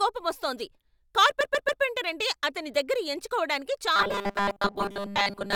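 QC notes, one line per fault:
1.40–1.81 s, repeated frames: right before "అంటే అతని దగ్గర ఎంచుకోవటానికి" there's a stutter. A chunk of about 139 ms gets played three extra times back to back, which adds roughly 418 ms to the clip. That's what you get when a short run of compressed frames is written or sent more than once: the decoder just plays the same slice again. The repetition is what makes it sound like a hiccup.
3.96–5.56 s, robotic sound from repeated short buffers: after "అంటే అతని దగ్గర ఎంచుకోవటానికి" the speech turns into a stiff, metallic buzz pitched at 200 Hz, and it lasts to the end. Most likely new audio was arriving too slowly, so playback kept looping the last 5 ms or so to fill the gaps, and a large share of the real audio got skipped. Looping at that length is what forces the fixed buzz pitch.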